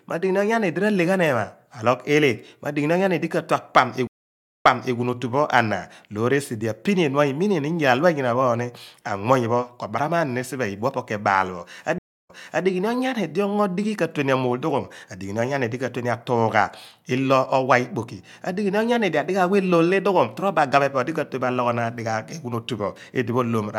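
Stream reconnects at 4.07 to 4.97 s and 11.98 to 12.66 s: the connection dropped, leaving silences of 572 ms and 309 ms, then a fresh decoder picked up a resent burst, so the speech resumes 320 ms and 363 ms earlier, repeating a moment.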